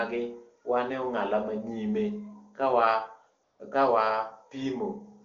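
From 3.43 to 3.59 s, about 160 ms, AMR comfort noise replaces the real background: the phone treated the pause as silence, sent no speech frames, and the receiver synthesised smooth, steady noise. A spectrogram shows a flat, featureless band switching abruptly in and out.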